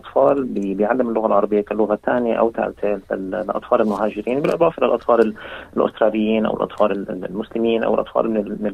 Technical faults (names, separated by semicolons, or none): none